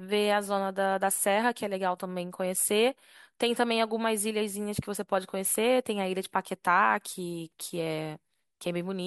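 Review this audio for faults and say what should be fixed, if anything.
No faults turn up in this recording, so nothing needs to be fixed.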